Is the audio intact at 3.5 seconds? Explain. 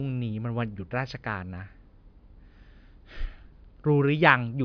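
Yes, at 3.5 seconds the speech runs without any audible dropout, click or other break, so the audio is intact at that moment.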